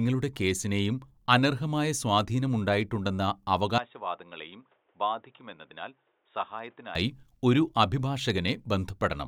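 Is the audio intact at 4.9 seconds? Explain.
No. From 3.78 to 6.95 s the input has likely switched to a poorer device, and the narrower device passes nothing above 3.8 kHz. The speech turns dull and boxy and drops roughly 10 dB, with a faint new noise floor and no gap at either switch.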